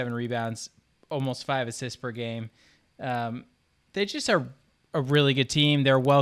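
Right through the speech there's a resampler restarted on every block: each 50 ms chunk was converted alone, so edge errors tick along at 20 Hz wherever there's signal.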